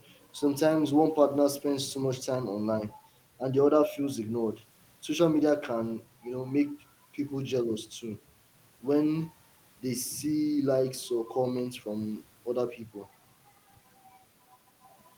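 Nothing goes wrong anywhere in this bit of speech; there's no fault to point to at any moment.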